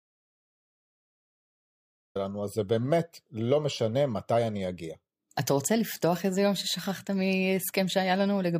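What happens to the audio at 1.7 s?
An audio dropout to silence covers 1.7 s: the speech is absent from the very start until about 2.16 s. The input was likely lost, with silence written in its place, so the gap is dead silence without any room tone before the speech cuts in.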